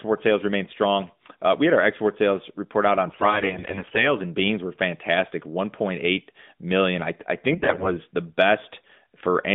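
From 3.08 to 4.10 s, after "sales report out on" and before "in beans were fantastic", AMR bit errors turn the voice hoarse and gargly. Flipped bits misplace the excitation pulses and skew the pitch and gain values. It comes back worse at 7.52 to 7.90 s, just after "million I I", with roughly three times the error rate, over a narrowband AMR line that sounds consistent with 12.2 kbps.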